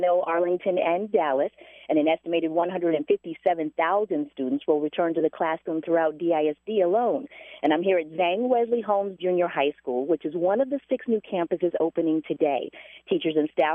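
No dropouts, clicks, distortion or other technical faults turn up anywhere in the recording.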